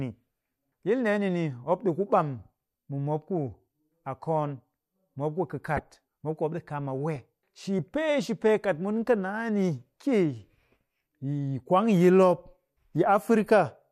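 Damaged bits in the compressed speech stream were decoded anyway, producing two corrupt frame decoded events: from 5.77 to 5.79 s, spanning a couple of frames, misplaced energy gives a fairly loud chirp; at 7.16 s a single bad frame leaves a much quieter blip.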